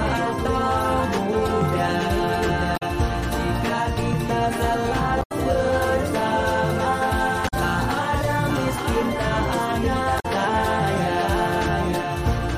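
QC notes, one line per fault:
Throughout: doubled audio track. A second full-band copy of the sound trails about a second behind, roughly 5 dB quieter, with no decay or room colour, so everything seems to repeat as a clean echo. This likely comes from the signal being captured twice, once through a slower path.
2.73–2.83 s, 5.19–5.32 s, 7.44–7.54 s, 10.16–10.26 s: damaged data in a compressed stream. Each spot gives a short chirp or squawk of about a tenth of a second. Corrupted bytes make the decoder misread frames and lose sync until it finds the next frame header.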